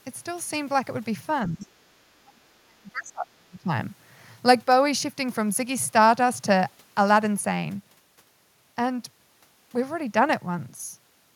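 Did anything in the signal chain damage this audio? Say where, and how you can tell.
Yes. Speech suppressed in double talk appears at 1.48 to 1.69 s, 2.14 to 2.41 s and 2.62 to 3.70 s, in the call-processing stage. In each span the speech level drops sharply, by roughly 20 dB in the first span and roughly 35 dB in the two later ones; the last lasts about a second. The likely cause is the echo canceller turning down the near talker along with loudspeaker echo while both sides spoke.

Other side's voice leaking through also points to call processing, around 1.60 to 1.67 s. It falls inside the first suppressed span. A brief second voice sits about 35 dB below the main speech. This is residual loudspeaker echo that the canceller failed to remove from the microphone signal, so the far side's voice reaches the recording underneath the near talker.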